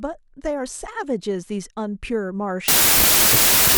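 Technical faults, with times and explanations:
2.68 to 3.78 s, wrong sample width: packed 24-bit samples are read as 32-bit, so each value straddles mismatched bytes. The speech sinks into loud noise, surfacing only where top bits align, and runs 1.33 times fast with raised pitch.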